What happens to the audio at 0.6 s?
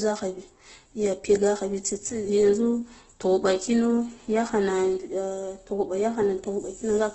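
Opus compression, present at 0.6 s as it is across the whole clip, is the likely cause of what is heard there. The speech sounds grainy and rough, with nothing above 8.1 kHz. This points to Opus in its music mode at a very low rate, around 12 kbps: each band keeps its energy, but with too few bits the detail inside bands is rebuilt from folded lower bands or noise, so the speech turns noisy.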